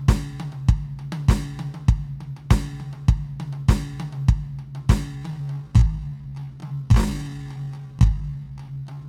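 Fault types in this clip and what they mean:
Time-stretched section: from 5.14 s to the end, the music abruptly drops to just over half its pace, 0.53 times normal speed, while its pitch holds steady. The slowed stretch drags. The likely cause is software lengthening that part of the audio to fill a set duration, repeating short fragments to stretch time without lowering the pitch.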